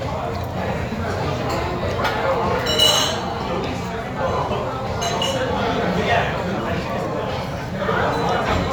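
No technical faults are audible anywhere in the recording.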